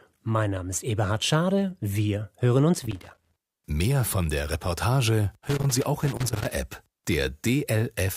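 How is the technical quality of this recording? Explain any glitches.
The recording is marred by loose connector crackle in two bursts: from 2.75 to 3.63 s, just after "wir hören", and from 5.38 to 6.54 s. A worn contact repeatedly breaks and remakes the signal path, chopping the speech into irregular scratchy crackle. The waveform shows jagged dropouts and spikes, and the spectrogram shows broadband vertical streaks.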